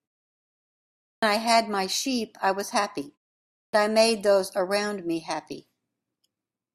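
At 1.08 s, after about 1.1 s of silence, speech starts with a clipped start after a pause: roughly 145 ms is missing, so the onset jumps in abruptly. It recurs at 3.59 s after a 0.5 s pause, losing about 144 ms. The output device drops into a low-power state during silence and needs time to wake before it passes audio.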